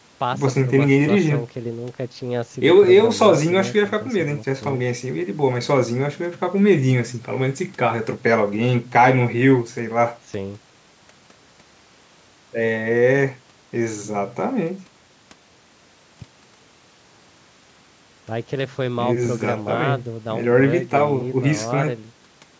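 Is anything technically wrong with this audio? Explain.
No, nothing in this speech is technically wrong.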